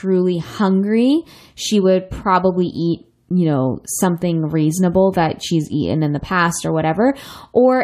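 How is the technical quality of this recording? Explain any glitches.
No technical faults are audible anywhere in the recording, so there are no glitches to explain.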